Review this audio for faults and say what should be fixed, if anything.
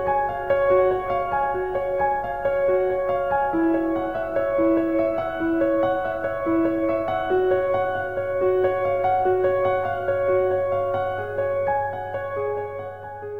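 Nothing needs fixing: the signal holds steady and continuous throughout, with its level and frequency content intact.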